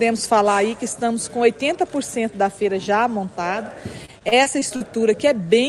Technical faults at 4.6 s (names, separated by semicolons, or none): repeated packet loss (robotic sound)